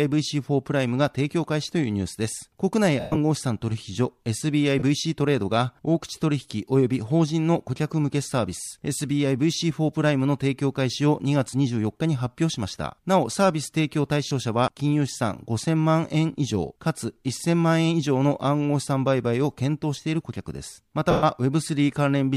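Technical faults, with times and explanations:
3.00–3.17 s, 4.79–4.83 s, 14.28–14.31 s, 21.11–21.23 s: lost LE Audio frames. About 140 ms lost across 160 ms at 3.00 s (longest run around 100 ms), then 30 ms, 30 ms and 120 ms. The decoder, likely LC3 with 10 ms frames, refills gaps with the last spectrum, signs randomised and fading, so sound smears into noise. Spectrograms show blurred, decaying bands; waveforms show a shrinking envelope.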